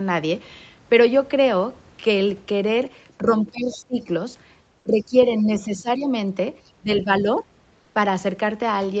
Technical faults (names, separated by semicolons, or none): speech suppressed in double talk; other side's voice leaking through; comfort noise in place of the background